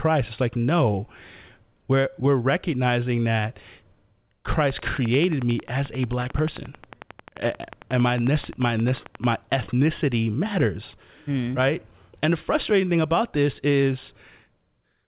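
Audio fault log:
4.52–9.33 s: train of clicks, a regular ticking at 11.2 per second, roughly fifty in all, peaking about 5 dB above the speech and audible in pauses, stopping just before "ethnicity matters mm right". The similar-shaped pulses point to likely interference or a faulty connection or power supply.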